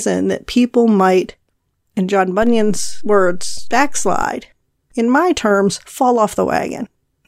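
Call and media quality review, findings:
DC step, 2.43 s to 4.22 s. Low thump at 2.43 s as the waveform's zero line jumps by about -17 dBFS, offset gone by 4.22 s. Speech continues unchanged between them. Probable source: converter recalibration or an offset input switched into the path. Distinguished from a dropout or clipping click because nothing is lost or flattened, and from mains hum because there is no sustained tone, only the offset change.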